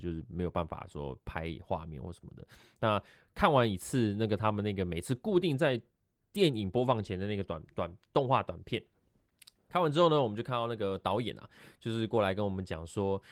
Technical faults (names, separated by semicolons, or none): none